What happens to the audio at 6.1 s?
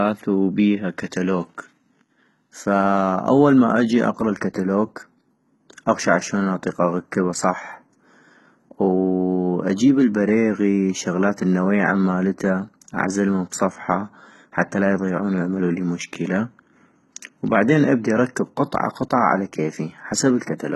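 At 6.1 s the speech is still under the HE-AAC compression that runs through the whole clip. The encoder likely kept only the lower spectrum and rebuilt the treble by copying lower bands upward, which fits a bitrate near 16 kbps. Sibilants turn gritty and lispy, with nothing above about 11.8 kHz.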